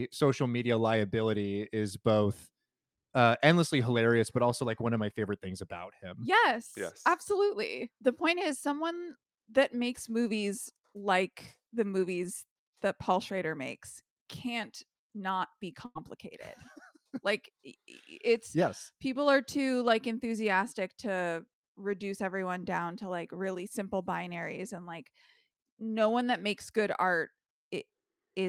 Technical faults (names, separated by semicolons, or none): burst of packet loss